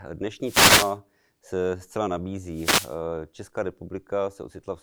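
A speech clip with two wireless microphone noise hits, heard as short swishes of static from 0.41 to 0.97 s, just before "se zcela", and from 2.50 to 3.00 s, right after "se zcela". Each time the analogue FM radio link fades as reflected signals cancel, so receiver noise surges over the voice and then recedes. Unlike a digital dropout, the audio is not muted or cut cleanly. Noise swells in and out around it instead.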